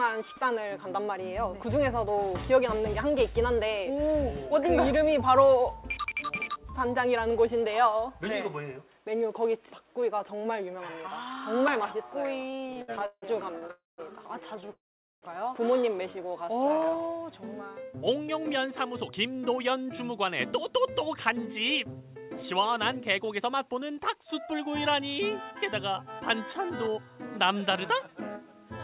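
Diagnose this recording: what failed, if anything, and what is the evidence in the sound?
Between 12.46 and 14.7 s the sound drags and stutters, hesitating 16 times in about two seconds. Each hesitation holds the previous sound rather than skipping ahead, and the longest lasts 162 ms. This is repeated stalls (stutter) at the network and jitter-buffer stage. Packets kept arriving late, so the buffer kept running dry and the receiver extended the last sound to cover each wait. That concealment accounts for about 19% of the span (0.43 s in total), and nothing is actually lost.

The sound also stops twice. From 13.71 to 14.0 s it halts for 0.27 s, most of which (0.19 s) fades to silence. From 14.72 to 15.24 s it halts for 0.5 s, with 0.45 s near-silent. Each time it resumes exactly where it left off. These are call audio freezes, likely caused by a burst of delayed packets emptying the jitter buffer. 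The receiver bridged each gap with fading concealment, and every pause added its full length to the playout delay.

From 16.03 to 17.09 s the sound slows to about 91% speed at unchanged pitch, drawn out and slightly stretched. This is a jitter buffer slow-down in call processing. To rebuild its reserve, the receiver repeated single pitch periods and fragments of pauses many times over, adding 100 ms in total.

From 18.67 s to 28.0 s the sound runs slightly hurried, at about 105% speed with pitch held steady. This is a jitter buffer speed-up. With more audio queued than its target, the receiver trimmed short pitch-period pieces again and again, shaving off roughly half a second to bring the delay back down. The band limit throughout, with nothing above 4 kHz, comes from the call path itself and fits G.711 A-law at 64 kbps.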